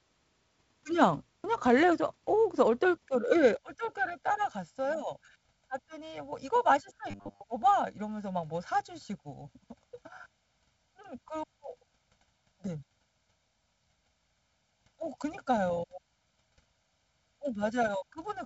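The clip is speech, and from 3.57 s to the end it has channel delay (comb filtering). One channel runs late by roughly 1.5 ms before the two are summed to mono. This cuts evenly spaced notches, the first near 400 Hz, so the voice sounds hollow and phasey. From 7.09 s to 7.42 s there is a robotic sound from repeated short buffers. A rigid, metallic buzz at 100 Hz replaces the natural voice. This likely comes from audio arriving too seldom, with a 10 ms buffer looped to fill the gap while most of the real audio is skipped. The G.722 wideband telephone coding is audible as a top end that stops a little above 7 kHz, with a faint upper-band hiss and, at 48 kbit/s, a slightly noisier lower band.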